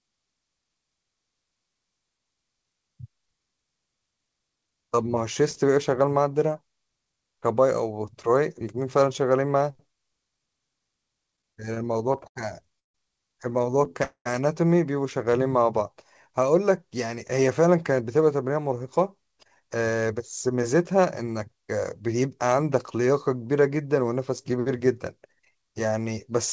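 From 11.32 to 12.38 s the speech drags and catches in sixteen short hitches, the longest 78 ms. This is repeated stalls (stutter): packets arrived late, so the receiver kept stretching the last sound to fill the gaps. At 12.79 s the audio drops to silence for 0.15 s, then resumes where it left off. That call audio freeze likely comes from held-up packets emptying the jitter buffer. Between 13.70 and 14.02 s four brief catches return, none longer than 16 ms, as a lighter stutter. At 14.03 s a second freeze follows, with a 0.22 s pause that goes silent for 0.1 s before the sound carries on. From 15.30 to 15.96 s the speech slows to about 92 % speed at unchanged pitch, with sounds drawn out. This jitter buffer slow-down came from the receiver repeating pitch periods to rebuild its reserve. From 17.91 to 22.15 s the speech runs hurried at about 108 % speed. In this jitter buffer speed-up the receiver trimmed roughly 0.3 s to cut its backlog. 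Throughout, nothing is heard above 8 kHz, which fits the G.722 coding of the call path.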